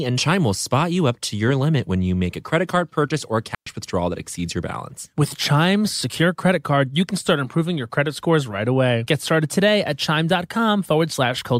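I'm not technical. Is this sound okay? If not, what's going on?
No. At 3.55 s the digital wireless link briefly lost too much data, so the receiver muted itself: a digital wireless dropout, heard as a clean 0.12-second hole in the speech with no crackle.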